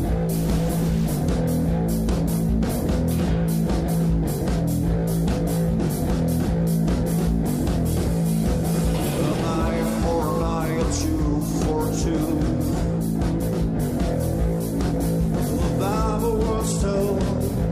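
From 0.35 to 1.17 s the sound turns harsh and buzzy, likely a stuck bit with steps around -35 dBFS. Unlike clipping, the grit persists even at low levels.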